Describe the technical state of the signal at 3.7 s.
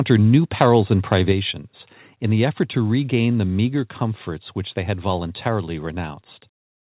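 At 3.7 s, before "comforts which they had", the level drops about 2 dB in one lasting step, likely a microphone volume stepped down, unlike compressor pumping, which recovers.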